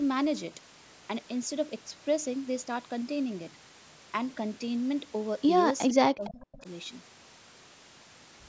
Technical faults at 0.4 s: none

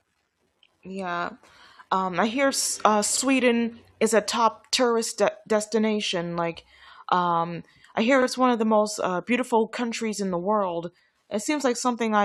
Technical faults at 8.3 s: overlapping chunks

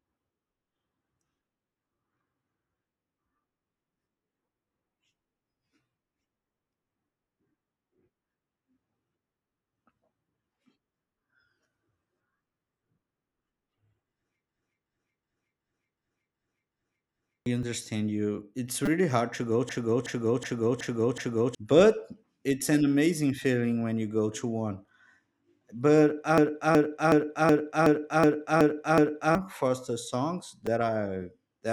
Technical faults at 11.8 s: none

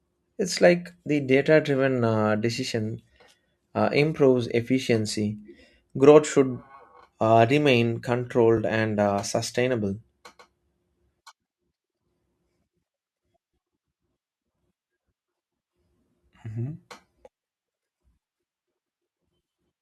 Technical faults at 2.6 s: overlapping chunks

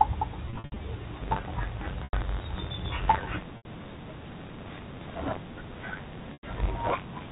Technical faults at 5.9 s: buffer tearing

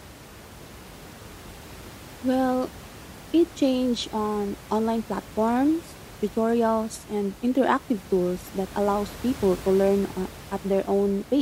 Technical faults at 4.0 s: none

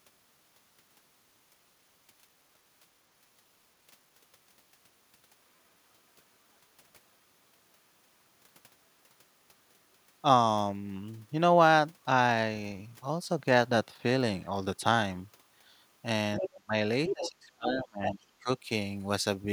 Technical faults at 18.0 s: speech suppressed in double talk; other side's voice leaking through

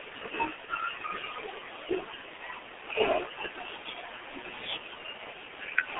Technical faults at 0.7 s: G.723.1 codec; VoIP packet loss concealed by the speech codec

